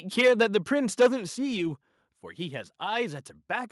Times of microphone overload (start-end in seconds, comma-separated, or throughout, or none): 0.18-0.56, 1.00-1.07